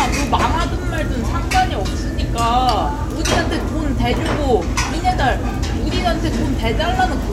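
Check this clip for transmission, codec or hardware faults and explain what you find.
Mains hum runs through the whole clip. It is a steady low tone at 50 Hz, and it sits only a little below the sound itself, so it is prominent. The cause is power-line coupling. A ground loop or a nearby transformer has leaked the mains supply into the signal path. That adds a constant 50 Hz tone with a few low harmonics above it. It gives the audio a persistent buzzing drone underneath.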